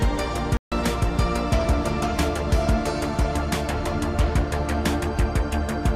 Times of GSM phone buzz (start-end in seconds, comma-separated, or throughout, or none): none